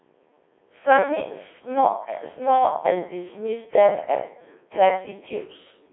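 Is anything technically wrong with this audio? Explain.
Yes. Throughout the speech the Codec 2 vocoder has taken over the sound, and the damage is heavy. Rather than keeping the waveform, the decoder rebuilds each frame from pitch, voicing, energy and a spectral envelope, resynthesised with sine waves, so the speech comes out robotic and buzzy. The crude detail points to a rate around 1.6 kbit/s. A spectrogram shows a band of about 250 Hz to 3.6 kHz, empty above 3.8 kHz, with regular harmonics.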